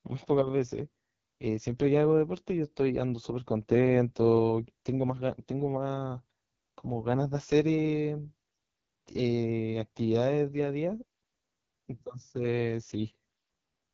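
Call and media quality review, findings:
AMR wideband (HD Voice) codec, whole clip: speech coded at the lowest AMR-WB rate, which fits roughly 6.6 kbit/s. Pulse-excited vocal tract model starved of bits. Heavy rough, raspy texture; band noise-filled near the top, nothing above 7.1 kHz.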